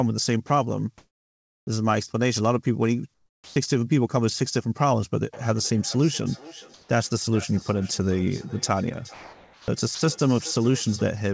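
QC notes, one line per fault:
0.47–0.50 s, 9.14–9.68 s, 9.95–10.01 s: sound dropped by the voice detector. Sound cuts to steady noise for 30 ms, 540 ms and 60 ms, likely because the detector mistook it for background and stopped sending.
0.98–1.67 s, 3.14–3.56 s, 6.74–6.89 s: comfort noise in place of the background. Natural background turns into featureless hiss, about 10 dB louder, about 14 dB quieter, then level-matched, likely from discontinuous transmission during pauses.
3.45–3.56 s: onset clipped by the voice detector. The sound starts abruptly, missing its first 110 ms, likely because the detector reacted late and comfort noise filled the gap.
5.33–11.18 s: feedback echo between two devices. Each sound returns roughly every 0.4 s, up to about 20 dB below the speech, as a second device replays it into the microphone.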